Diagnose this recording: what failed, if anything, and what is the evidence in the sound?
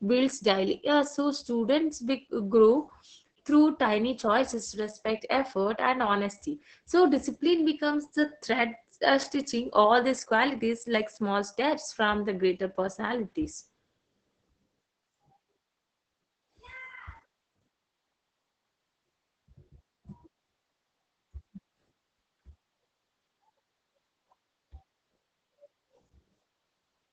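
Throughout, the speech sounds muffled, hoarse and faintly robotic, with nothing above 8.7 kHz. This is Opus voice compression at the codec stage. The SILK linear-prediction coder is working in wideband at a bitrate that sounds like about 10 kbps, coding the excitation coarsely, which leaves the heavy damage heard.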